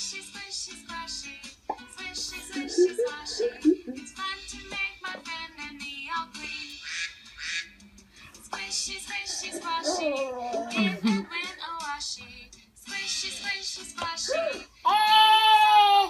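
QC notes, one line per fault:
6.70–6.72 s, electrical switching spike: a sharp snap at roughly -30 dBFS sits on top of the sound without interrupting it, likely a nearby switch arc.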